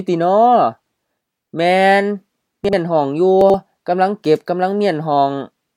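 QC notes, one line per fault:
2.65–2.73 s, chunks out of order: Two blocks of about 43 ms play swapped, the first arriving one chunk late. Nothing is missing, but the sequence jumps back and forth, so the sound briefly stutters.
3.41–3.54 s, chunks out of order: One block lands two chunks late, after its successors. The 128 ms span sounds jumbled.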